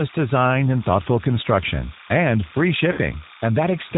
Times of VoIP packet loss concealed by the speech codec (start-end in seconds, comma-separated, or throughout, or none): 2.92-2.99